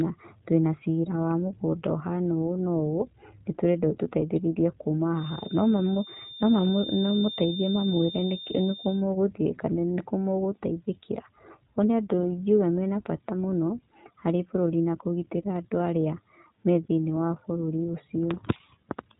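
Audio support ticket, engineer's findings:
iLBC codec, whole clip: narrowband, nothing above 3.9 kHz, speech clear but plainly rough and synthetic. Frame-independent excitation coding in 20 ms blocks, which fits the 15.2 kbps mode; no carry-over between frames.

Feedback whistle, 5.13 to 9.06 s: thin steady tone at 3.6 kHz, about 15 dB under the speech, swelling and fading slowly in level. Likely loudspeaker-to-microphone loop sitting at the edge of feedback, sustaining one frequency without building up.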